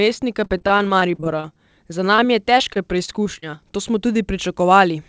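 From 0.44 to 1.58 s, repeated packet loss (robotic sound) sets in: a dozen or so packets arrive late or not at all, gaps up to 41 ms, and the receiver patches each by extending the previous sound. With roughly a quarter of that stretch synthesised, the speech turns choppy, with fragments missing.

At 2.16 s a short concealed packet loss drops about 20 ms before decoding. The fill, running slightly longer than the hole, continues the preceding sound and blends back, heard as a brief smear or wobble.

From 2.58 to 3.55 s the repeated packet loss returns, lighter this time: about six gaps, the longest 28 ms, covering around an eighth of the span. The same broken texture appears, in sparser bursts, over a band that stops at 8 kHz, which fits a wideband call codec.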